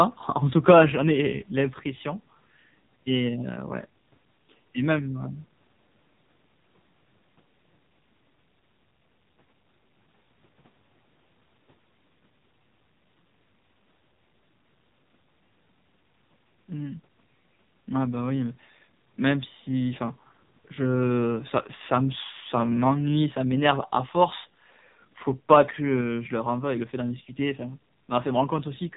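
A speech recording that's been through the AMR narrowband mobile codec the whole way: nothing above 3.8 kHz survives, and the voice is heavily buzzy and synthetic, which fits a low mode around 5.9 kbps. From 0.68 to 0.82 s there's a harsh, crackly edge on the peaks, likely microphone overload, with the input roughly 6 dB too hot and the tops of a small share of samples sheared off.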